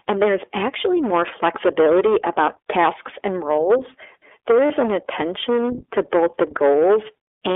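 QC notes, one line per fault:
throughout: hard clipping, about 12 dB of overdrive flattens the peaks of roughly a tenth of samples, so loud syllables carry a harsh, fuzzy crackle.
throughout: iLBC codec, narrowband coding in 20 ms frames, which fits a rate near 15.2 kbps, leaves speech thin, slightly synthetic and cut off above 3.5 kHz.
4.66–4.72 s: lost iLBC frames, a 40 ms dropout is concealed by repeating the last pitch cycle, heard as a brief buzzy held vowel before "an attention to both".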